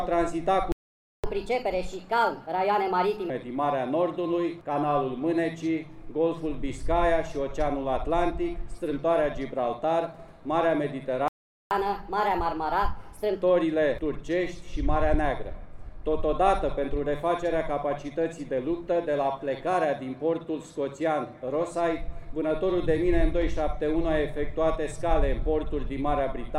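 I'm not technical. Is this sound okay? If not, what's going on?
No. The sound cuts out twice: at 0.72 s it goes silent for about half a second until 1.24 s, and at 11.28 s for about 0.43 s until 11.71 s. This is a playback stall, likely the player running out of audio data and pausing until more arrived.

Right after each gap, from 1.24 to 3.30 s and from 11.71 to 13.42 s, the sound runs fast, at 1.25 times normal speed, and higher in pitch by roughly four semitones. This is catch-up at higher speed: the player rushes through its backlog to make up lost time, then returns to normal.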